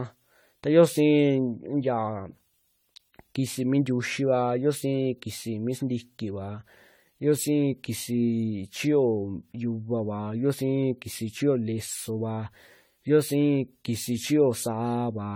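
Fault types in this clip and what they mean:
Generation loss: speech sounds swirly, smeared and hollow with blurred attacks throughout, likely from around ten passes through AAC at roughly 64 kbit/s.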